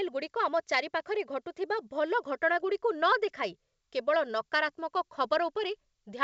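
Nothing goes wrong here: the speech comes over a G.722 wideband telephone link at 64 kbit/s, and whatever that coding leaves on it is faint at most.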